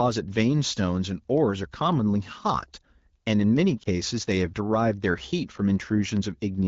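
At 3.83 to 3.87 s, radio errors corrupted a speech frame, so the decoder filled the gap with the previous frame's pitch and vocal tract settings at reduced gain. The dropout fits a single lost 20 ms frame, heard as a brief dip or warble in the AMR wideband (HD Voice) speech.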